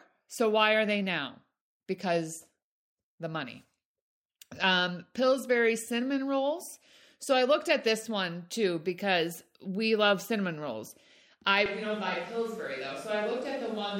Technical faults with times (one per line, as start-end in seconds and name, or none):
11.66-14.00 switch to a distant microphone